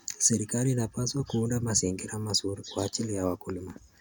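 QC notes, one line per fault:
No faults heard anywhere in this speech recording.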